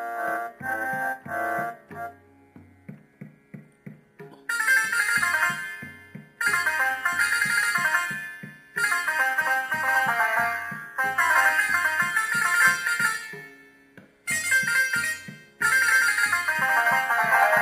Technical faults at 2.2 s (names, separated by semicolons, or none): crude rate conversion